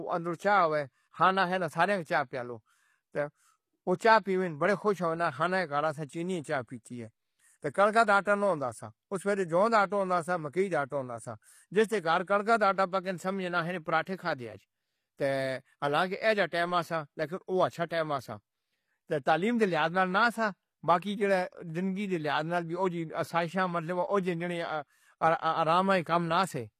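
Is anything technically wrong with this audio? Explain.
Yes. Throughout the speech, the upper frequencies sound synthetic: sibilants come out gritty and lisping, with a metallic sheen over the top end. This is likely HE-AAC compression at a low bitrate, roughly 24 kbps. Only the lower band is coded directly, and the treble is rebuilt by copying lower content upward, so the upper harmonics no longer line up with the fundamental. On a spectrogram, the region above the crossover shows blocky, repeated patterns that echo the bands below.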